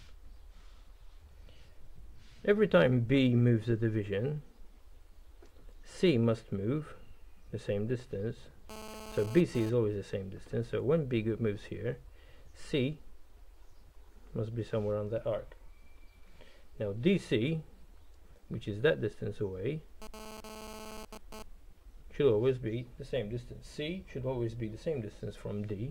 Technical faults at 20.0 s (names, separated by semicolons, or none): GSM phone buzz